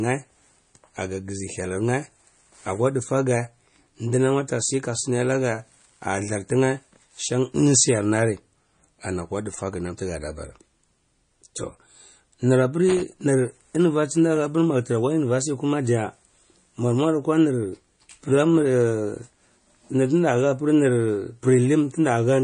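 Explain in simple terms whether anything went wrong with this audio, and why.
Yes, two things went wrong. The speech was most likely squeezed hard with MP3 compression, a way of shrinking audio files by throwing away detail the encoder judges unimportant. Here it discarded too much: everything above about 9.8 kHz is gone, so the voice sounds dull and muffled. Faint details flicker in and out from moment to moment, giving a watery, swirly quality, and s sounds turn metallic and smeared throughout.

Separately, from 12.89 to 13.02 s there is a loose connector crackle. A worn or dirty plug or socket briefly lost and regained contact many times in quick succession, chopping the signal on and off. That produces a short, rough burst of crackling and scratching, about a tenth of a second long.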